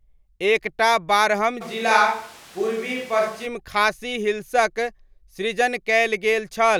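After "एक टा बारहम", from 1.63 to 3.45 s, the speech suddenly turns roomy and hollow and loses bass, with background noise about 25 dB below it, while the level stays roughly the same. This is likely a switch to a distant microphone, ending abruptly before "खासी हिल्सक सृजन".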